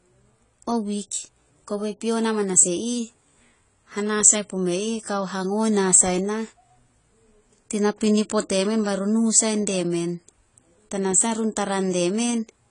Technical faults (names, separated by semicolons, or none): AAC compression; pre-echo